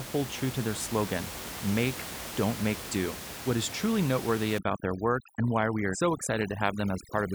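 At 4.58 s, overdone noise removal sets in and lasts to the end at 7.34 s. The noise reduction is far too strong. It drops frequency bands that sit near the room noise, about 11 dB below the speech. Quiet parts of speech vanish with them. Gaps turn almost silent, with twinkling specks.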